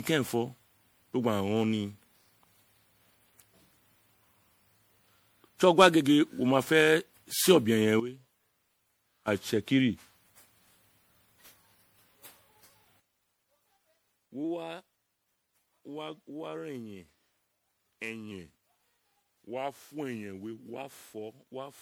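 Throughout, the speech sounds swirly, hollow and smeared, with blurred consonant attacks. This is generation loss, likely from repeated lossy re-encoding, something like ten passes through an MP3 chain, which fits 96 kbit/s, each pass requantising on a shifted frame grid so the noise and spectral holes pile up.

From 5.25 to 6.05 s the speech suddenly runs fast and sharp, about 109 cents higher and 6.5% quicker, then snaps back. This is a drift correction step, likely clock-matching software abruptly raising the playback rate to drain its buffer.

From 8.00 to 9.28 s the speech and the background noise drop together by about 13 dB, then return, both edges abrupt rather than ramped. This is a sudden gain jump, likely a digital gain change applied from one sample to the next.

At 13.0 s a second sudden gain jump cuts the level by about 17 dB, and it stays down to the end.

From 14.44 to 15.44 s another drift correction step raises speed and pitch by the same 6.5% and 109 cents. 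From 18.31 to 20.76 s a further step goes the other way: the speech slows by 6.5% and drops about 116 cents before snapping back up.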